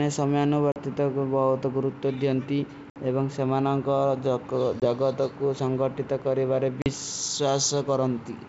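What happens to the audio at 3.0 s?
Packet loss on an ADPCM call hits from 2.90 to 3.03 s: about 60 ms of audio, a few packets, drops to a hard-edged silence. Unlike a plain dropout, the decoder's predictor and step size have lost track of the sender's, so the speech comes back slightly distorted before settling.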